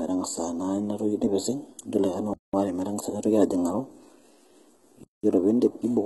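Right from the start, the whole speech clip sounds squeezed through HE-AAC compression, and heavily. Nothing comes through above about 11.8 kHz, and the treble that is there sounds synthetic rather than real, with gritty, metallic s sounds. That's likely spectral band replication at work: the codec keeps only the lower band and fakes the top by copying it upward, which fits a very low bitrate around 16 kbps.

Then at 2.34 s the sound drops out cleanly for 200 ms until 2.54 s, and the same thing happens again from 5.04 to 5.24 s. That's a gap between chunks. The audio seems to have been delivered in pieces about 2.5 s long, and silence got inserted at each join instead of the pieces butting together. Nothing seems to be missing, but the speech is interrupted at each join.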